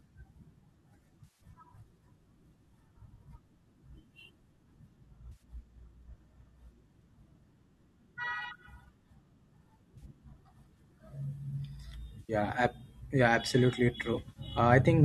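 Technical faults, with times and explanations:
1.24–1.41 s, 5.32–5.42 s, 9.98–10.05 s, 12.20–12.33 s and 14.14–14.40 s, AAC frame loss with concealment: brief smeared, noisy, phasey patches in the sound. They come from lost frames in a likely low-delay AAC stream, which the decoder refilled from the last good spectrum. The final event is several scattered dropouts, the longest about 70 ms.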